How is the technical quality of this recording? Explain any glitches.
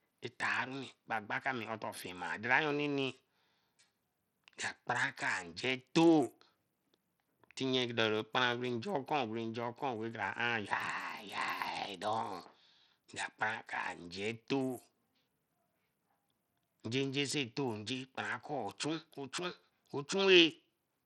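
The technical quality is poor, with codec damage that is plainly audible throughout this speech recording. Bluetooth SBC compression, running for the whole clip, is the likely cause: the coder splits the sound into a few wide frequency bands and shares out a small bit budget without modelling hearing, which fits a low setting around 80 kbps. Starved of bits, the upper bands lose treble or flicker in and out, while coarse quantisation leaves a gritty, aliased roughness over everything.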